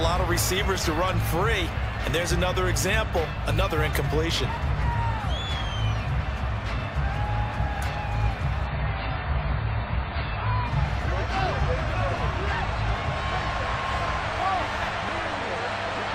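Mains hum sits under the whole clip: a steady 50 Hz tone from power-line leakage, likely a ground loop or a nearby transformer. It runs roughly 15 dB below the audio, so it's plainly audible as a constant low drone.

From 8.67 to 10.67 s you get an adaptive stream at a lower bitrate. The player switched to a cheaper version for two seconds, consistent with AAC dropping from about 96 to 16 kbit/s. Everything above 5 kHz vanishes, codec artefacts rise, and quality flips abruptly with no gap.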